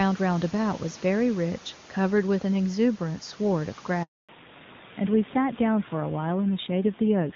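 A handover gap runs from 4.03 to 4.29 s: the call switched networks, no speech frames arrived for 260 ms, and the speech dies away to silence. A fallback to narrowband follows at 4.29 s and lasts to the end, with everything above 4 kHz gone, so the speech that was crisp HD Voice before the switch now sounds dull and muffled. That points to a narrowband codec replacing the wideband one.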